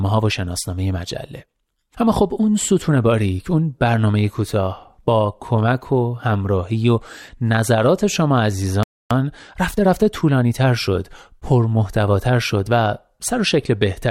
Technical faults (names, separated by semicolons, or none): playback stall; time-compressed catch-up